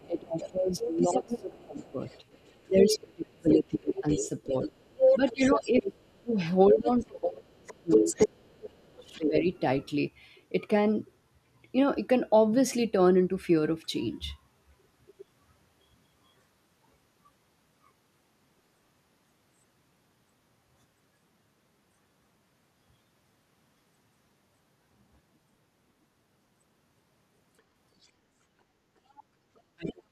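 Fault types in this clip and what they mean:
Other side's voice leaking through: A second voice sits in the microphone signal, most likely loudspeaker playback that the echo canceller failed to subtract. From the start to 9.6 s it is strong, only around 5 dB under the main talker. It returns as brief scraps at 15.19 to 15.24 s and at 28.03 to 28.07 s, the latter barely audible, then more clearly from 29.57 to 29.92 s, roughly 15 dB down.
Speech suppressed in double talk: With both sides active, the canceller cannot tell local speech from echo and attenuates everything, likely the cause of the main talker dipping and breaking up. Between 0.06 and 9.46 s, about five seconds in total are pulled down, at worst by around 30 dB. At 29.76 s, overlapping the last leakage burst, the talker drops again by roughly 40 dB for about 0.3 s, until the clip ends.
Background gated by the echo canceller: Just after the faint leakage at 28.03 s, the canceller clamps the microphone while far-end playback is present, so the room tone sinks briefly and comes back once it releases. 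The dip runs from 28.19 to 28.39 s, 200 ms long, and reaches about 9 dB at its deepest. This short hole in the ambience shows as the background momentarily thinning out.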